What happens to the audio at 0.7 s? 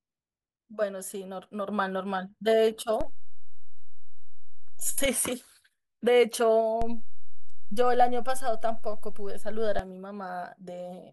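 Nothing goes wrong at 0.7 s; the speech runs through that moment intact, with no dropout, click or distortion.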